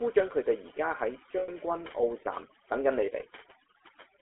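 A noise reduction stage set far too aggressively, overdone noise removal, strips bands near its noise estimate throughout, leaving a lowered background that breaks up into twinkling specks. The speech also passes through the GSM full-rate codec, whose pulse-driven vocal-tract model gives a buzzy, gravelly roughness, plainly audible, and a telephone band of about 300 Hz to 3.4 kHz, which fits 13 kbps full-rate coding. From 1.38 to 1.49 s, and again from 3.06 to 3.10 s, lost GSM frames are concealed by repeating the previous frame, so the sound hangs as a rough metallic ring, longer in the first gap.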